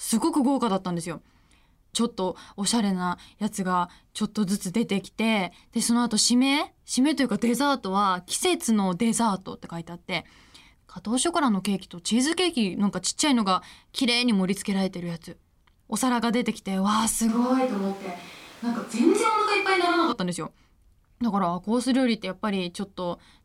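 At 17.29 s the speech suddenly goes roomy and thin until 20.12 s, likely a switch to a distant microphone, with steady level but more background noise.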